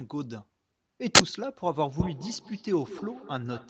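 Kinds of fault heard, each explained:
Uninitialised buffer: At 1.15 s a burst of harsh digital noise breaks into the speech and ends by 1.20 s, about 43 ms later. A block of playback memory was sent out before any audio had been written into it, so stale data was played as if it were sound. The length fits a 2048-sample block. A click is a single spike and a dropout is silence, but this is a whole block of loud noise unrelated to the speech.
Feedback echo between two devices: From 2.0 s to the end, the speech comes back in repeats roughly every 200 ms, at their loudest about 15 dB below the direct speech. A second device in the room plays the call aloud and the first device's microphone picks that sound up and sends it back. Each echo canceller removes only what its own device plays, so the loop survives. Room reverberation forms a smooth, continuous tail, but these are separate copies at a steady interval.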